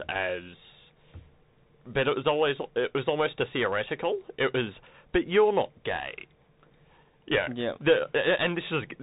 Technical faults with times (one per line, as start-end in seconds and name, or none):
0.00-9.03 Bluetooth CVSD headset codec